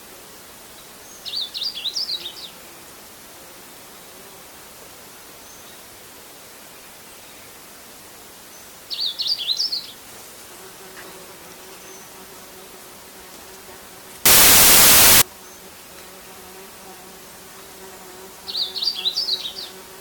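The audio turns into loud, broadband hiss from 14.26 to 15.22 s, samples built from the wrong bytes: each value is assembled misaligned or byte-swapped, so jittery low bits dominate. A spectrogram shows a solid full-band noise block; the waveform fills out densely.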